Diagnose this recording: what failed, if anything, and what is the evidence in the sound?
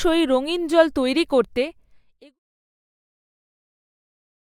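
Nothing in the chain has failed: the speech signal stays continuous and intact, and the only level change is a deliberate smooth fade-out that begins around 1 s and reaches silence by 2.4 s, tapering gradually without a click or hard edge.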